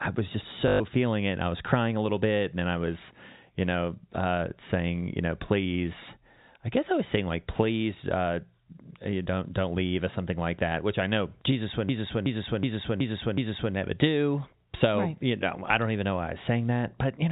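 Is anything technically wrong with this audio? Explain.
Yes, there are two faults. First, packet loss with last packet repeated, from 0.68 to 0.80 s between "I was just" and "feeling it": 120 ms of packets went missing (which fits six 20 ms packets), so the receiver replayed the last one, producing a brief robotic stutter.

Second, a system hang loop from 11.89 to 13.75 s, just before "never do": the system froze while the audio hardware kept cycling one 0.37 s buffer (about a 16384-sample buffer), so the same fragment repeats five times at 2.69 Hz, like a skipping record. The 4 kHz ceiling of the G.711 telephone coding is also audible.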